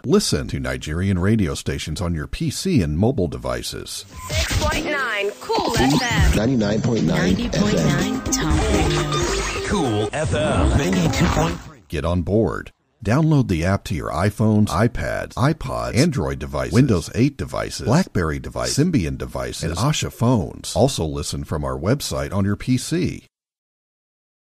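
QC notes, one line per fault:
2.24 s, repeated buffer: a very short segment of about 1.45 ms, which fits a 64-sample buffer, is played back several times in a row, consistent with four extra plays, because fresh audio did not reach the output in time and the device replayed its last buffer. Each repeat meets the next at a hard edge, and with a buffer this small the stutter collapses into a single brief click or buzz. No audio appears to be lost.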